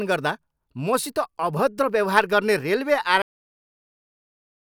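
At 1.23 s a single sharp click cuts through the speech, showing on a spectrogram as a thin vertical line spanning the whole frequency range. This is most likely dropped samples: a tiny run of data, on the order of a few samples or around a tenth of a millisecond, went missing, so the waveform steps abruptly from one value to a later one. The gap is far too brief to remove anything audible; only the discontinuity is heard.

At 3.22 s the speech stops mid-sound, a cut-off end. Instead of decaying naturally, the signal falls straight to digital silence, which holds for the remaining 1.5 s or so. The final buffers of audio were never written or played out, so the waveform is truncated at an arbitrary point. The lack of any tail or fade makes the stop sound abrupt and unnatural.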